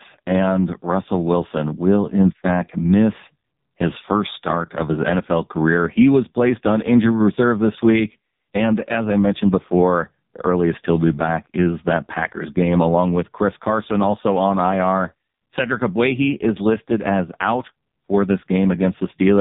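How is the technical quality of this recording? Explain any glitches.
Pretty rough, honestly. Throughout, it's AMR narrowband mobile codec audio: nothing above 3.8 kHz, and the heavy buzzy, synthetic edge fits one of the lowest bitrate modes, around 5 kbps.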